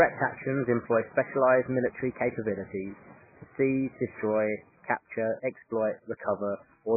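Speech, with heavy MP3 compression throughout. Nothing is audible above 2.5 kHz, and the sound is watery and swirly, likely from a very low bitrate.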